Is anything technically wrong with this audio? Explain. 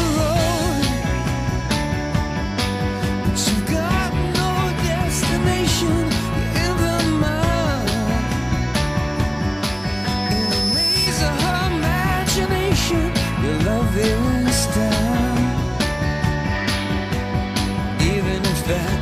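Yes. From 9.70 to 11.10 s there is loudspeaker feedback squeal: a microphone re-amplifies its own loudspeaker, and loop gain above one at 5.2 kHz makes that tone grow. It swells over about a second into a piercing squeal, reaching roughly the level of the sound itself.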